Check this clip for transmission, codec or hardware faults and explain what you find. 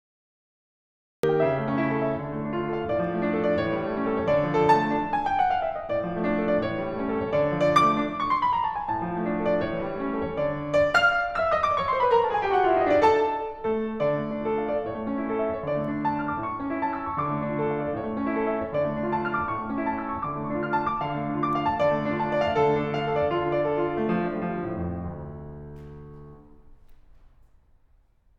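There is one fault, a cut-off start. The clip opens with digital silence from 0.0 to 1.23 s. The music then appears abruptly, already mid-sound. Capture began late, so the passage never gets its natural attack or fade-in. The entry sounds chopped rather than played.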